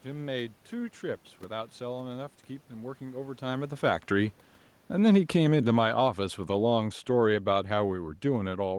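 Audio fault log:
4.91 s to the end, automatic gain falling: the voice and room background sink together steadily because the gain control judged the input too loud and lowered its gain.
5.96 to 6.40 s, automatic gain rising: voice and background swell together by about 3 dB as the gain control briefly judged the input too quiet and raised its gain.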